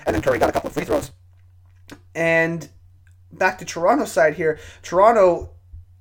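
Speech, with a block size mismatch (truncated) from 0.0 to 1.11 s. Each block's tail is discarded, producing a 150 Hz buzz and speech running about 1.6 times fast, consistent with 512-sample writes. The timbre stays normal, unlike a resampling speed-up, which raises the pitch.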